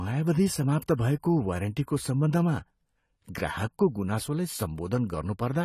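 AAC compression runs through the whole speech clip: nothing is present above 14.1 kHz, and the damage is plainly audible as a dull, smeared top with a fizzy, warbling edge on sibilants. This likely comes from AAC-LC at a low rate, which fits about 32 kbps.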